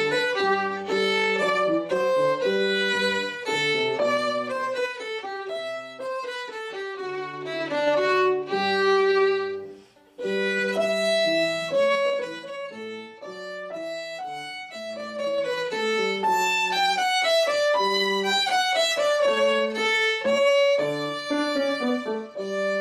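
A gain control is moving its level in coarse 3 dB jumps with no smoothing between them, so each jump clicks and the moves come out as zipper noise. Between 4.0 and 5.1 s the level drops by around 10 dB in a few slow steps. It climbs back by a similar amount from 7.2 to 8.06 s. From 11.88 to 12.5 s it falls about 15 dB in quicker steps, then rises about 15 dB from 14.9 to 15.72 s. Each move is heard as a ticking zip riding on the sound.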